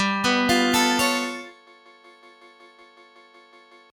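From the start, a noise suppressor built for speech has been applied to this sound and stays active for the whole clip. It treats sustained tones, ambience and decay tails as noise and pulls them down by around 20 dB, while transients mostly pass. The result pumps and thins, with held material sinking after each attack. On a spectrogram, energy flares at onsets and then drops into dark gaps. The waveform's envelope collapses sharply behind each peak instead of decaying smoothly.

At 1.67 s a system hang loop begins and runs to 3.90 s. The host stopped supplying new audio, so the output hardware replayed the same block from its ring buffer. That block is 185.8 ms long, which fits an 8192-sample buffer. It repeats 12 times at 5.38 Hz, producing a rigid machine-gun stutter, and about two seconds of real audio are lost. On a waveform, an identical segment is copied end to end. On a spectrogram, the same vertical pattern recurs at fixed intervals with a hard edge at each seam.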